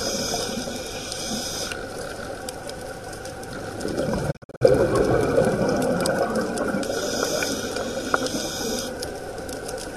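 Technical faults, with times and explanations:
4.30–4.63 s, digital broadcast dropout: the receiver mutes failed frames, so the sound fades out over 20 ms and breaks into several short holes, the longest 48 ms, losing 192 ms within 288 ms. This fits about eight lost frames, and the missing audio never returns.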